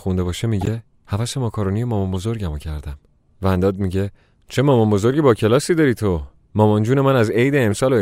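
Speech with three bursts of corrupt frames decoded. A loud burst at 0.61–0.69 s spans a few consecutive frames, then single-frame blips at 4.71 s and 7.71 s, each quieter. Flipped bits misdirected the decoder's gains and spectral codes, producing spurious energy.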